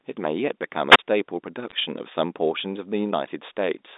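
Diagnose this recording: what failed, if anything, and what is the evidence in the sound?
Wireless microphone squelch dropout, at the analogue radio link. From 0.89 to 0.99 s the speech gives way to a short burst of hiss, then a hole of near silence lasting about 33 ms, before the speech comes back. This happens when the FM carrier from the transmitter fades: noise rises as the signal weakens, and once it drops below the receiver's squelch threshold, the receiver mutes its output until the carrier recovers.

Bit errors on a digital phone line, on the network side of the G.711 A-law link. Between 1.69 and 1.72 s there is a brief cluster of sharp ticks over the speech, which itself stays intact through the telephone band of roughly 250 Hz to 3.7 kHz. Each corrupted bit changes one companded sample. A flip on the sign or a high-order bit throws that sample far from its neighbours, and the result is a click. 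The error rate here is low, on the order of a tenth of a percent.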